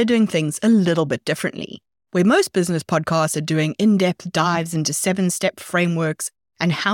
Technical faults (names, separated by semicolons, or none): none